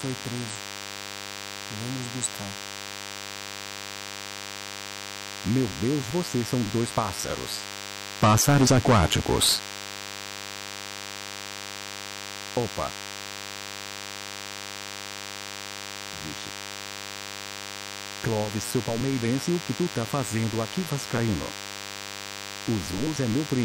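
A steady, thin DECT cordless phone buzz runs through the whole audio, repeating at 100 Hz, roughly 10 dB below the signal, from a nearby handset's radio bursts rectified in the audio circuit.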